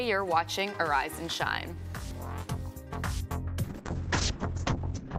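At 3.65 s a call bitrate drop hits. The sound goes rough and muffled, which fits the encoder falling from about 128 to 6 kbps and losing everything above 8 kHz.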